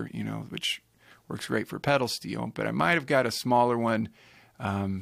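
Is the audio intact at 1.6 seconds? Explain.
Yes, the audio is intact at 1.6 seconds, with no dropout, click, distortion or other fault to be heard at that point.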